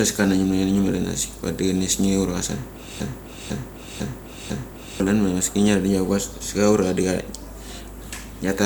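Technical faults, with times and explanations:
3.00 to 5.00 s, broken-record loop: a half-second fragment of speech repeats exactly four times, back to back. Likely a stalled stream resending its last buffer, losing the real audio.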